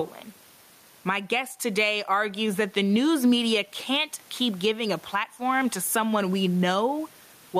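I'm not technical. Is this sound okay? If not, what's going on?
No. Throughout the clip the speech sounds squashed and flat, with loud and soft parts pushed close together in level. That effect is called gain pumping. The likely cause is a microphone level set far too high, with an automatic limiter pulling the volume sharply down on every loud moment and letting it rise again in each gap.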